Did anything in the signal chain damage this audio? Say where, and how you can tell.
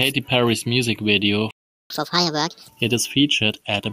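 Yes. A playback stall silences the speech from 1.51 to 1.90 s, roughly 390 ms, likely because the player ran dry or its thread blocked.

Catch-up at higher speed follows in playback from 1.90 to 2.68 s. The backlog is resampled at 1.5x, lifting pitch about seven semitones before returning to normal.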